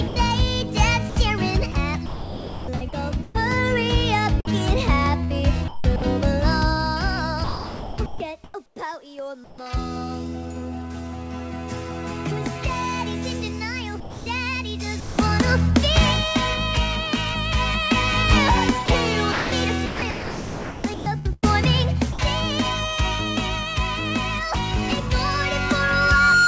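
From 0.08 to 0.16 s, 80 ms of sound is dropped by the voice detector. Steady synthetic noise stands in for it. The likely cause is the sender's voice detector judging the start as background and pausing transmission while comfort noise filled the gap.

Sound is chopped by the voice detector across five stretches: 1.10 to 3.36 s, 4.45 to 6.02 s, 7.44 to 9.58 s, 14.0 to 15.18 s and 18.86 to 22.19 s. Within them, about 925 ms, 300 ms, 1020 ms, 440 ms and 1465 ms are lost to comfort noise. The detector was likely toggling repeatedly on quiet passages.

At 25.33 s a loudspeaker feedback squeal starts. A 1.4 kHz tone swells over about a second. It ends up roughly 5 dB above the sound and runs to the end. The microphone was hearing its own loudspeaker, and loop gain exceeded one at that pitch. The call path's 8 kHz ceiling leaves the tone well inside the band.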